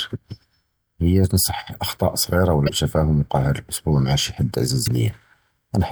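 It's a short speech clip with damaged data in a compressed stream, showing up twice as brief glitches: one from 2.65 to 2.69 s and another from 4.84 to 4.88 s, each about 40 ms. At those spots part of the encoded stream was corrupted or lost, so the decoder misread those frames and had to resync on the next good frame header, leaving a quick glitch in the speech each time.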